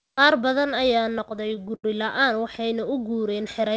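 Right after "badan ayaa", from 1.04 to 1.85 s, there's stutter: a dozen or so short stalls where the jitter buffer ran dry and stretched the last sound, nothing lost.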